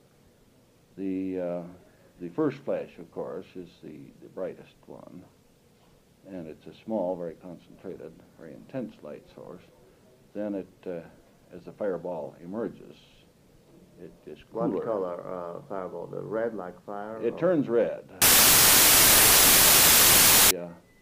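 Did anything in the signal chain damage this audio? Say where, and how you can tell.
Yes, right near the end. From about 18.22 s to 20.51 s the sound collapses into loud, harsh noise with the original only faintly audible underneath, and it plays at 0.75 times speed with the pitch pulled down to match. That's a wrong sample width fault at the sample-format conversion stage: data written as 32-bit integers were read back as packed 24-bit. The byte boundaries no longer line up, so most values are built from pieces of neighbouring samples, and only some of them keep the top bits of the real signal.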